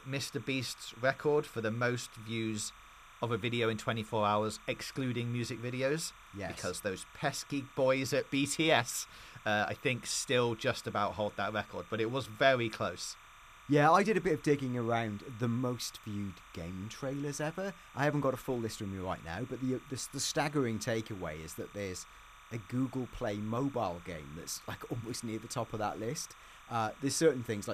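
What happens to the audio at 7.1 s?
At 7.1 s you're hearing timecode bleed, present across the whole clip. Linear timecode at 30 frames per second leaks in, switching near 1 and 2 kHz, so a chirping warble sits well under the speech.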